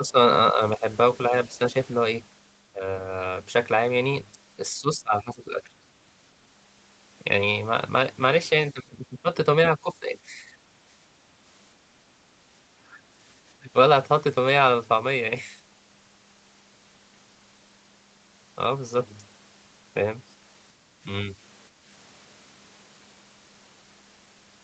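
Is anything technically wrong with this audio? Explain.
Yes. Speech suppressed in double talk at 0.0–1.75, 2.73–2.82, 4.73–5.73, 8.72–10.43, 12.77–12.99 and 13.6–13.75 s: the speech dips by roughly 5 to 25 dB, likely because the echo canceller confused it with loudspeaker echo.

Background gated by the echo canceller at 21.73–21.84 s: the canceller pulled the microphone down about 6 dB for roughly a tenth of a second, briefly dropping the room sound.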